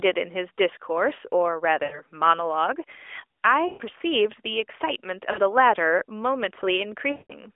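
Lost AMR speech frames at 1.84–2.02, 3.68–3.82, 5.32–5.41 and 7.12–7.38 s. The decoder stretches the last sound, which then fades and returns rough.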